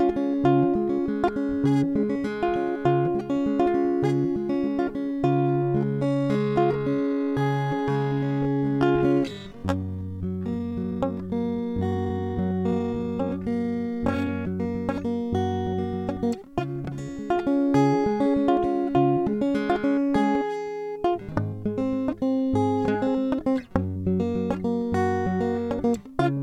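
From 5.29 s to 14.29 s the music becomes a time-stretched section, running at about 0.54 times normal speed with pitch unchanged. It was likely stretched in software by repeating short pieces, so the passage drags abruptly.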